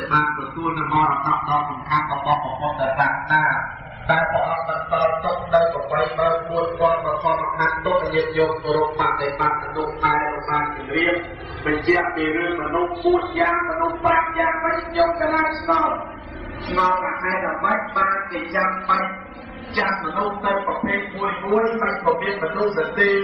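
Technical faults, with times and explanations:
Throughout: channels drifting apart, separate clocks about 150 ppm off, so inter-channel delay slides to roughly 4 ms, sweeping comb notches one way, unlike a cycling flanger.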